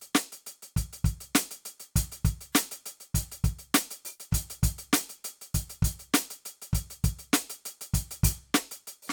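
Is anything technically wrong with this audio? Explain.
No, nothing technically wrong can be heard in this music clip. There are no faults to point to at any moment in it.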